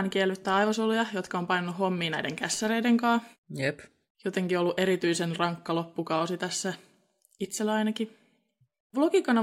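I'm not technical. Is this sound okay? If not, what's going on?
Yes, nothing in this recording points to a technical problem with the sound signal itself.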